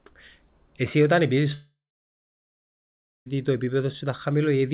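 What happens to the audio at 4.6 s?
Nothing goes wrong at 4.6 s: the speech there carries on intact through the call path, band-limited to nothing above 4 kHz as G.711 A-law telephone coding gives, with no break, dropout or added artefact at that moment.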